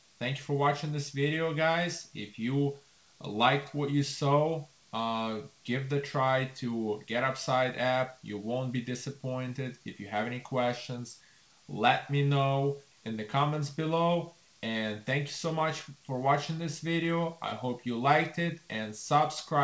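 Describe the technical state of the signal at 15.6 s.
At 15.6 s the signal is intact, with no dropout, glitch or distortion, just the steady band limit of the call path, which leaves nothing above 8 kHz, as fits a G.722 wideband codec.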